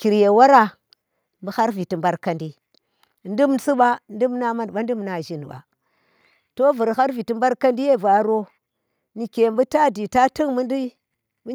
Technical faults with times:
1.02 microphone volume stepped down

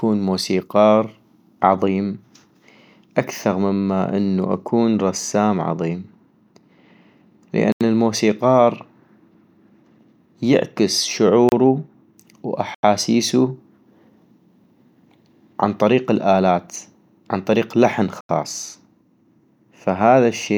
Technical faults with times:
7.72-7.81 block of digital silence
11.49-11.52 block of digital silence
12.75-12.83 block of digital silence
18.21-18.29 block of digital silence

